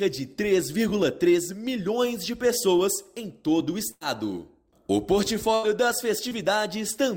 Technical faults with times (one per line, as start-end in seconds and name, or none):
3.91-4.03 burst of packet loss
5.55-5.65 burst of packet loss
6.29-6.33 short concealed packet loss